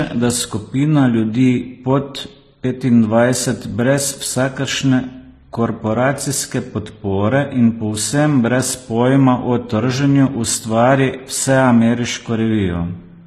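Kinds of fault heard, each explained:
Transcoding between lossy codecs: the speech carries two stacked kinds of coding damage, a swirly, smeared upper band beneath warbling, gritty artefacts, most likely from a low-rate HE-AAC encode later squeezed into MP3 near 42 kbit/s. A spectrogram shows a hard ceiling at 14.9 kHz with patchy, blocky energy below it.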